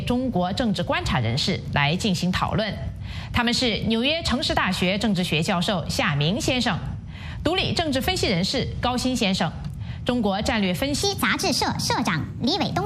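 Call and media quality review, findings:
Section at the wrong speed, 11.02 s to 12.85 s, through to the end of the clip. The audio runs 1.3 times fast and turns high and hurried, pitch raised about five semitones. Likely cause: playback or editing clocked at the wrong rate.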